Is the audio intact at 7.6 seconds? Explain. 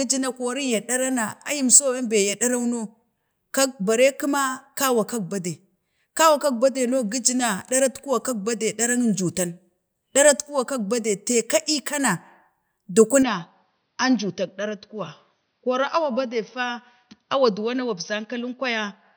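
Yes, at 7.6 seconds the speech plays through cleanly, with no dropout, click, distortion or other fault to be heard at that moment.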